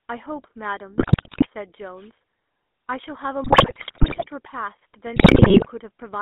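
GSM full-rate codec, throughout: the speech sits in a narrow line band of about 250 Hz to 3.6 kHz and carries the buzzy, gravelly roughness of pulse-driven vocal-tract coding, which fits the 13 kbit/s GSM full-rate codec. The damage is plainly audible.

GSM bit errors, at 0.98 to 1.47 s, 3.44 to 4.26 s and 5.16 to 5.69 s: corrupted bits reach the decoder and scramble its filter, pitch and gain values frame by frame. Squawks, pops and gargling result, pointing to error rates of several percent.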